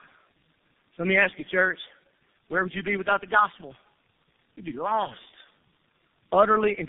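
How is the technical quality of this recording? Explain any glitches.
The quality is poor throughout, with one fault running the full length of the speech.

Tandem speech coding affects the whole clip. The call seems to have passed through about three low-rate speech codecs in sequence, with each decoding and re-encoding the previous one's damaged output. Nothing reaches above 3.7 kHz, so the speech sounds muffled, rough and warbly. A single narrowband codec would leave it muffled but cleaner. Here the errors compound at each stage, producing grainier, more smeared speech than any one codec at its rate would.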